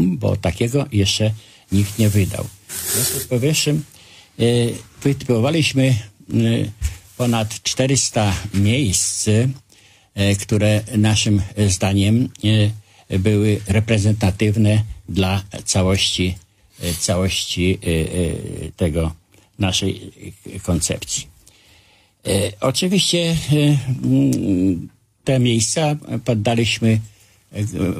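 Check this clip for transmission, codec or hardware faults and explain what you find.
There's one fault here, a short burst of damaged data in a compressed stream, from about 13.66 to 13.71 s. For roughly 50 ms, some of the compressed bytes are wrong, whether lost, zeroed or overwritten, so the decoder can't read those frames properly. It drops sync and has to hunt for the next valid frame header before playback settles again. You hear it as a brief glitch, a quick blip that cuts across the sound and then is gone.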